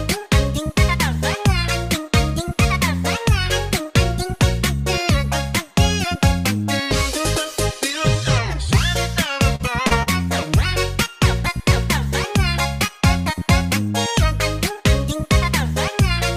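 At 9.55, 9.87 and 10.03 s, short concealed packet loss: each time about 40 ms of audio arrived too late, and the decoder bridged the gap by extending the preceding sound, giving a brief smear or wobble. A spectrogram shows smoothed, repeated texture with softened edges.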